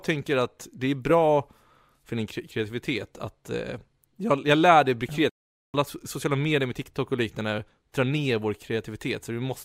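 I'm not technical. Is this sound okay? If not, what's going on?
No, there's one glitch. Right after "jag lär dig bli", the speech cuts out for almost half a second, from 5.30 to 5.74 s, then comes back with "sociala medier med". That's a playback stall, most likely the player briefly running out of data.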